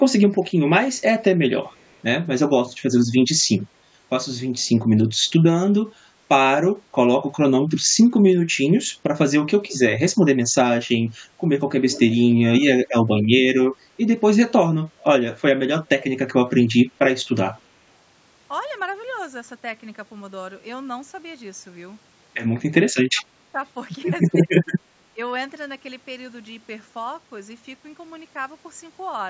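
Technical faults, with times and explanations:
1.66–1.97 s, 11.89–12.18 s and 14.99–15.04 s: echo leak. A delayed copy of the speech comes back 239 ms late. It is very faint at first, roughly 40 dB down, and louder near 11.9 s, at about 20 dB down. This is likely a loudspeaker echo the far-end canceller failed to remove.
2.48–2.92 s, 9.47–9.73 s, 12.62–13.31 s, 22.69–23.6 s and 24.31–25.18 s: speech suppressed in double talk. The speech dips in short pieces, by roughly 15 to 25 dB at worst. This likely happens because the echo canceller cannot separate local speech from echo while both sides talk, so it lowers both.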